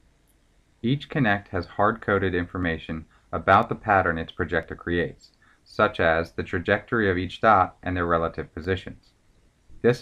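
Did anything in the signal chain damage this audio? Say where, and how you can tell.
Yes. A tick recurs about once a second from 0.64 s to 9.65 s, roughly ten in all, audible only under signal. These are periodic USB or driver dropouts: at the driver or buffer stage, about a millisecond of audio is skipped at each interruption, splicing the waveform abruptly.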